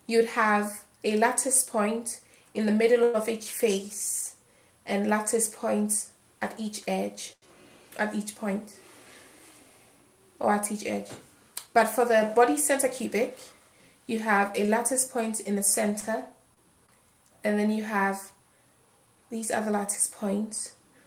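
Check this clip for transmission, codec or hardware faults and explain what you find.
Network delivery faults are audible in several places, all from packets arriving late or not at all.

Call audio freeze, 3.03 to 3.16 s: a 105 ms fill, likely from held-up packets draining the jitter buffer. It sounds like a fading buzz and shows as a smeared, decaying spectrogram band.

Short stall from a late packet, 7.33 to 7.48 s (91 ms fill) and 14.66 to 14.70 s (24 ms): the last sound is stretched until the packet lands. It is heard as a held sound with a slight buzz or dip, with repeated waveform cycles.

Jitter buffer speed-up, 11.66 to 13.53 s at 105% and 17.96 to 19.73 s at 103%: pitch-period slices totalling about 100 ms and 70 ms are removed to cut delay. The first sounds hurried at unchanged pitch, and harmonics stay level while events crowd together.

Scattered short gaps, 16.00 to 16.90 s: about three small holes, each up to roughly 20 ms, are patched by continuation. 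They are heard as brief ticks, with tiny spectrogram smears and kinked waveform joins.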